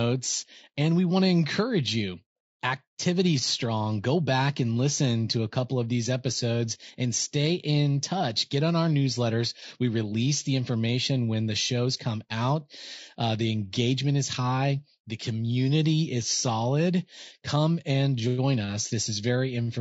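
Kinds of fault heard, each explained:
Low-delay AAC compression: the speech is plainly rough and grainy for the whole clip, with noise between the harmonics and a lowered or synthetic top band, likely from AAC-ELD at a rate fitting 32 kbps. Unlike packet loss, the damage is continuous, not in bursts.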